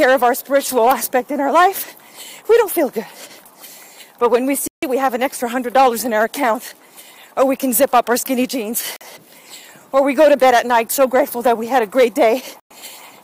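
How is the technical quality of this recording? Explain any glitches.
Three brief dropouts interrupt the audio. Bluetooth stall at 4.68–4.83 s, 8.96–9.01 s and 12.60–12.71 s: the sound cuts to silence for about 150 ms, 44 ms and 110 ms, then resumes. This is likely because radio interference delayed packets, so the headphones' buffer emptied before retransmitted data arrived.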